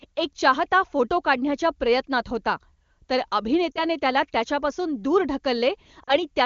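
From 3.72 to 3.85 s, between "काढण्याच्या प्रयत्नात होता तर" and "त्याला त्याच्यापासून दूर", the speech briefly drops toward silence, then returns thin for a moment; the same dropout recurs at 6.03 to 6.17 s. These are lost AMR speech frames: radio errors corrupted about 40 ms of each burst, which points to two dropped frames, and the wideband decoder bridged the gap by repeating the last good pitch and vocal-tract settings at falling gain.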